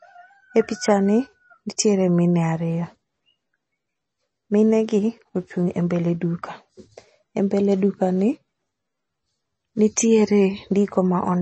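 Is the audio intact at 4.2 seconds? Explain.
No. At 4.2 seconds the speech carries the same damage heard across the whole clip, likely MP3 compression. Nothing sounds above about 8.3 kHz, and the remaining sound has a watery, swirling quality where weak frequency lines drop in and out between frames, with smeared consonant attacks. That fits a starved encoder near 32 kbps. A simple low-pass filter would also remove the treble, but it would not cause this flickering, metallic churn.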